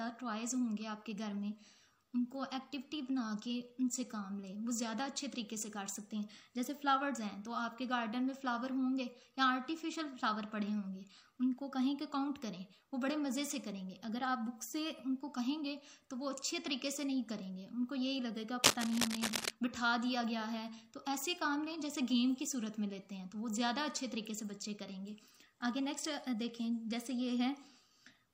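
From 18.63 to 19.51 s, a burst of cable scratch noise sits over the sound, a little louder than the audio itself: a dense, ragged scratching and rustling lasting just under a second. The likely cause is a worn cable, connector or control being moved, so its contact resistance jumps around rapidly. On a waveform this shows as a thick, irregular band of spiky fuzz; a spectrogram shows broadband vertical streaks smeared across the frequency range.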